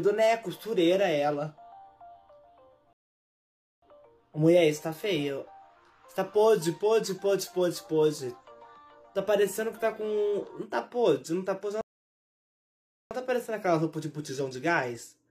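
Two rebuffering stalls cut the audio to silence at 2.93–3.83 s and 11.81–13.11 s, adding 0.89 s and 1.30 s. Unlike dropouts, playback resumes exactly where it stopped, with nothing skipped.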